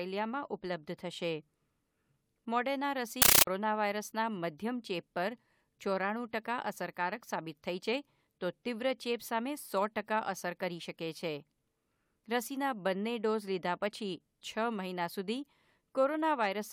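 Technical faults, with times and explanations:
3.22–3.47 s, compressed stream played as audio: an AC-3 bitstream, which fits a 640 kbps Dolby Digital stream, was treated as ordinary samples rather than decoded. Each frame plays as a 13.3 ms noise burst and then silence, 31.25 times a second, giving loud chattering static.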